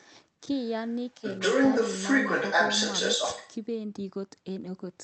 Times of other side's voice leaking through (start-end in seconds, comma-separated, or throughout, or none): 0.01-0.09, 0.64-3.55